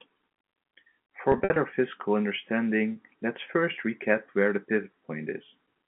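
Telephone speech with two brief glitches: from 1.32 to 1.56 s the sound turns held and buzzy in patches, and at 2.92 s a shorter buzzy catch. This is packet loss with pitch repetition, the receiver looping the last pitch period to cover about 120 ms lost (runs up to 60 ms), then 40 ms, over clean G.711 coding.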